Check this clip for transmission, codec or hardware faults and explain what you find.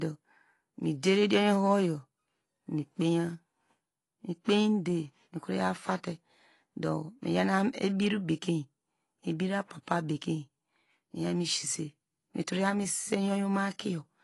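The speech shows one codec fault, present from start to finish: AAC compression. Nothing is heard above 11.5 kHz, and the codec damage is plainly audible. Sibilants sound fizzy, and sustained vowels take on a warble. This is likely AAC-LC, with spectral detail starved and smeared across long frames. The effect suggests a low bitrate, around 32 kbps. A plain low-pass filter would dull the top just as much but leave no warble.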